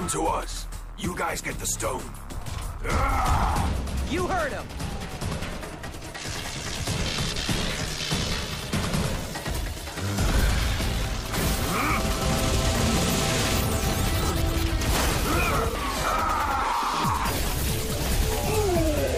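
No technical faults can be heard in this audio. There is nothing here that calls for a time or a cause.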